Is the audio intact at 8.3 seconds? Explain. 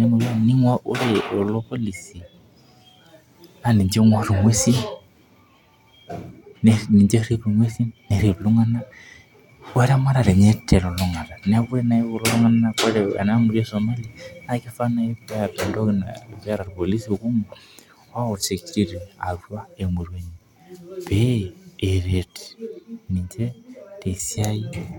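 Yes, the speech at 8.3 seconds plays through intact, with no dropout, click, distortion or other fault at that moment.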